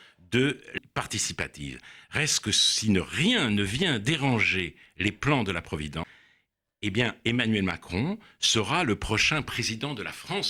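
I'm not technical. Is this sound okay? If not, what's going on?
No. At 0.78 s there is a CD skip: the disc player's laser lost its place and landed on another turn of the disc's spiral track. The player goes silent for a tiny moment, roughly two thousandths of a second, then carries on from the wrong spot. You hear it as a small tick, and the speech jumps abruptly instead of flowing on from where it was.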